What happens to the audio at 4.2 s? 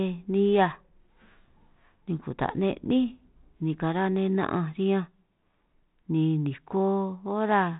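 At 4.2 s the audio is intact, with nothing beyond the light, band-limited character of the G.726 ADPCM telephone coding that runs through the whole clip.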